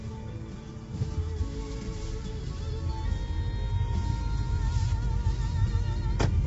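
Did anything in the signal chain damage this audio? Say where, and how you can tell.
Yes, it's damaged at the codec stage, and it's audible for the whole clip: the sound is rough and grainy, with noise filling in around the tonal parts, and nothing above 7.8 kHz. That points to likely low-delay AAC compression, AAC-ELD, starved at around 24 kbps, where its short frames smear fine detail.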